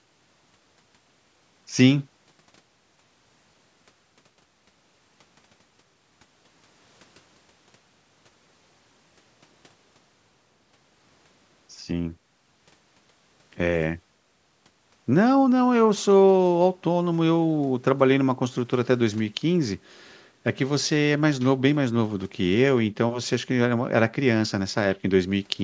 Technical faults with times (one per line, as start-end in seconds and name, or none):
none